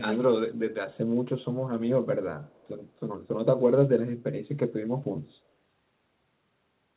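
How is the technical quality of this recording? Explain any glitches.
The recording has two faults: a persistent dullness from a wrong treble cut, and a brief faint echo.

De-emphasis applied wrongly, from 0.87 s to the end: a treble cut meant to reverse a boost the signal never had tilts the response steadily downward, about 11 dB lower at 10 kHz than at 1 kHz. Within the call's narrow band, which stops at 4 kHz, the speech sounds muffled and dull.

Echo leak, 2.44 to 2.68 s: a very faint, delayed copy of the speech surfaces about 175 ms behind the original, roughly 35 dB down. Its likely cause is a far-end loudspeaker whose echo canceller let part of the microphone pickup slip back into the call.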